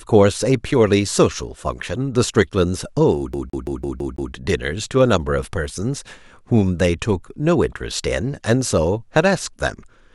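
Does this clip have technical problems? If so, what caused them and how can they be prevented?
Yes. From 3.33 to 4.33 s the speech is caught in a CD stuck on one turn. A 166 ms slice repeats six times, with a brief mute at each jump. A scratch keeps throwing the laser back one track. Clean discs and rip with error-correcting software.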